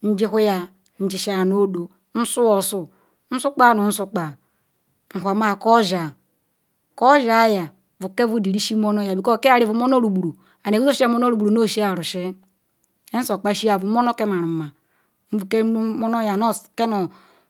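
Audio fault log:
No technical faults can be heard anywhere in the speech recording.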